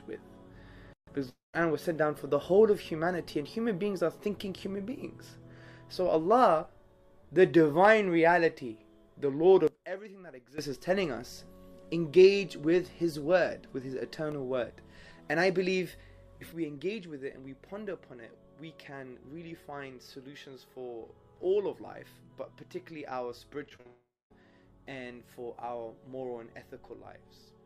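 At 1.29 s the sound breaks into a buzzy continuation of the last sound that fades out and leaves near-silence until 1.55 s, when the audio resumes with a gap in it. This is a long network dropout, likely a run of packets that never arrived. About 240 ms of audio is lost. The receiver padded the hole by extending the previous sound, and roughly 160 ms of that stretch is close to silent.

From 9.67 s to 10.58 s the level falls abruptly by about 17 dB and then snaps back. The sound and the background noise drop together, with no fade at either edge. That points to a sudden gain jump, likely a digital gain value applied from one sample to the next without a ramp.

Between 14.14 s and 14.85 s there are five small ticks at a steady spacing. The longest of them is only a millisecond or two. These are CD scratch ticks. A blemish on the disc corrupted more data than error correction could rebuild, once per revolution. 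Each time, the player patched the damaged samples by interpolating or muting them, which leaves a tiny regular click.

At 16.52 s a second sudden gain jump drops the level by about 8 dB. Sound and noise floor fall together in a single step, and the level stays down until the end of the clip. The likely cause is again a gain change applied without any smoothing.

Near 23.7 s three short concealed packet losses arrive in quick succession, at 23.69 s, 23.76 s and 23.81 s. Each one lost 20 to 40 ms of audio. The decoder bridged each gap by continuing the preceding sound, then blended back into the real signal. The result is a short smeared, wobbly patch in which brief sounds may be swallowed.

Straight after these, from 23.87 s to 24.32 s, a second long network dropout follows, likely from an extended interruption in delivery. About 440 ms is missing. The fill decays from a buzz into roughly 240 ms of near-silence before the audio picks up again further on.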